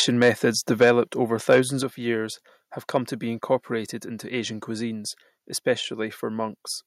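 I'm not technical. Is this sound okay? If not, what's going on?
No. Around 0.22 to 0.45 s, 0.81 to 0.92 s, 1.51 to 1.6 s (just before "of years have") and 2.95 to 2.97 s (between "of years have" and "to be incorporated into"), the loudest moments crackle harshly. This is likely microphone overload: the input was set too high, so the tops of the peaks were cut off.

At 0.83 s and again at 1.83 s, just before "of years have", everything suddenly gets quieter and stays that way. This is likely the microphone volume being stepped down by the call software reacting to those loud peaks.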